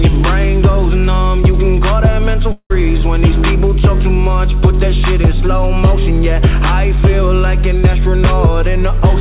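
Long network dropout, likely, from 2.52 to 2.72 s: the last sound is stretched into a fading buzz, then 70 ms of silence, and 180 ms never returns.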